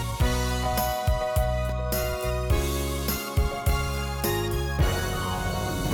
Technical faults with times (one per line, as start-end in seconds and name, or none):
1.69-5.69 periodic USB or driver dropouts